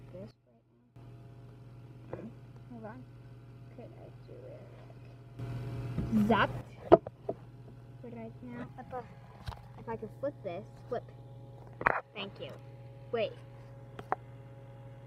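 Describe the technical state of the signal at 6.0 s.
A sudden gain jump runs from 5.39 to 6.61 s: the level, background noise included, leaps about 12 dB at once, likely from gain applied without a ramp.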